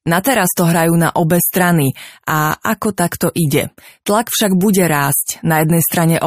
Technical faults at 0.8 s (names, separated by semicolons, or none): none